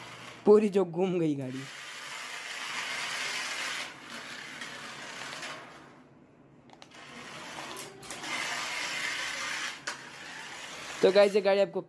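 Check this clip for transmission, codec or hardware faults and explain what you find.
Nothing audible in the clip points to a transmission, codec or hardware fault.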